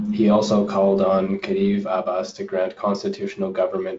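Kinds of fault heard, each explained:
No faults heard.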